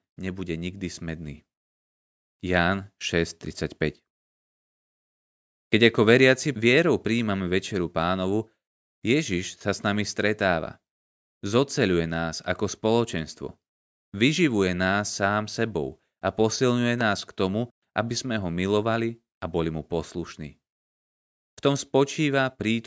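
From 0.35 to 3.42 s there is automatic gain rising: the gain control judged the input too quiet and raised its gain by about 8 dB. Speech and background noise swell together, and on a waveform the envelope widens steadily across those three seconds while the noise floor brightens on a spectrogram.

Between 5.77 and 8.49 s comes automatic gain falling, the reverse move. The control treated the level as too loud and lowered it by about 4 dB, so speech and background sink together. The waveform envelope narrows gradually and the spectrogram dims evenly across all frequencies.

At 17.01 to 17.03 s, after "sám sebou a posilňuje" and before "k tomu aby sme", a single loud pop cuts in, peaking roughly 10 dB above the speech while the sentence continues underneath. Its likely cause is a sudden voltage step from a plug, switch, static discharge or driver glitch. On a waveform it is a tall, narrow spike. 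On a spectrogram it is a thin vertical stripe running up to the 8 kHz ceiling left by the call microphone processing.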